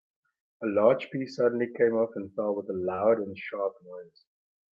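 At 2.95 to 3.02 s, short concealed packet loss occurs. About 20 ms of audio arrived too late, so the receiver extended the preceding sound, leaving a brief smear.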